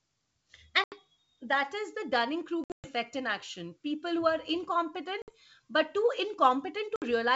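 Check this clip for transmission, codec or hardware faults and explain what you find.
Packet loss on an ADPCM call breaks the speech four times, at 0.84 to 0.95 s (about 80 ms gone, before "that is the"), 2.64 to 2.87 s (about 180 ms scattered over 200 ms, longest gap 120 ms, before "in action"), 5.22 to 5.31 s (about 60 ms, between "who are incompetent" and "but too"), and 6.96 to 7.03 s (about 60 ms). Each gap is a hard-edged silence, with loss in steps that fit 20 ms packets. Because ADPCM codes only the change from a predicted value, the decoder's predictor and step size drift away from the sender's during the hole. Speech therefore resumes with brief, slight distortion before it resynchronises. The G.722 wideband coding at 64 kbit/s carries speech up to 7 kHz with at most faint hiss in the upper band.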